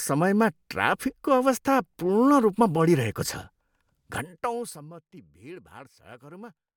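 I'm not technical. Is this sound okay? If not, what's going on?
Yes, the recording sounds technically sound, with nothing in the signal itself that needs fixing.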